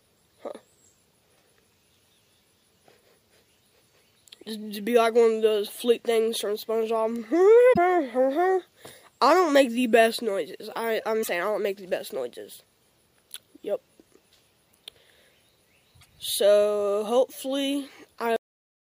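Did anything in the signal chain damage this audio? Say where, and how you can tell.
Yes. Three short glitches break into the sound at 7.69 to 7.78 s, 11.20 to 11.29 s and 15.98 to 16.07 s. This is damaged data in the compressed stream, a codec-stage fault: corrupted bytes make the decoder misread frames, lose sync and hunt for the next valid header.

At 18.36 s the sound stops abruptly mid-event and drops straight to digital silence with no natural decay. This is a cut-off end at the playback or storage stage. The final buffers were never written or played, so the audio simply ends where the data ran out.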